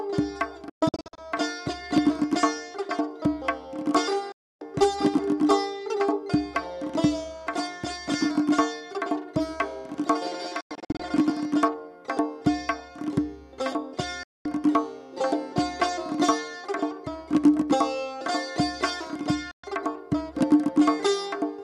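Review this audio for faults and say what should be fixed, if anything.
Sound cuts to silence with a very fast, roughly 3 ms fade at 0.70–1.18 s and 10.61–11.00 s (scattered holes), and at 4.32–4.62, 14.23–14.46 and 19.51–19.64 s. This is digital broadcast dropout: the receiver muted on failed frames, and the gaps fit 24 ms frames. Better reception or antenna placement would prevent it.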